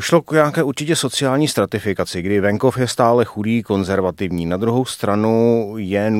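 No technical faults are audible anywhere in the speech recording.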